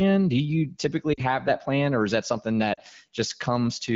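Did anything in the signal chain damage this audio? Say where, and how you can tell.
Yes. The damage happened on the radio link of a mobile call, where speech frames were lost before reaching the AMR wideband decoder. It shows up as lost AMR speech frames at 1.13 to 1.21 s, just before "have that plan or", and at 2.73 to 2.79 s, just after "or is that something". Each gap is about 40 ms, which fits two 20 ms frames. The decoder hides each gap by repeating the last good pitch and vocal-tract settings at falling gain. That gives a brief smeared fade to near silence, not a hard cut to silence or a click like a buffer dropout.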